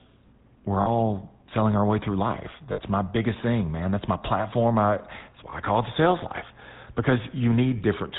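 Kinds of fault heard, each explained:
GSM full-rate codec: The speech has gone through the original GSM phone codec, which rebuilds the voice from a vocal-tract model driven by evenly spaced pulses, a scheme that fits about 13 kbps. The damage is plainly audible: a buzzy, gravelly grain runs through every syllable, and nothing above 4 kHz survives. A simple low-pass filter would only dull the sound, but here the roughness sits inside the voice itself.
lost GSM frames: Four short breaks occur where the decoder filled missing frames by repeating the settings of the last good one, so each break sounds as a rough, metallic ring rather than a gap. They fall at 0.82 s (40 ms, just before "selling our way through"), 2.72 s (60 ms, between "our way through life" and "my biggest thing man"), 5.5 s (20 ms, after "my platform I that's") and 7.78 s (20 ms). A plain dropout would leave silence instead of this ringing.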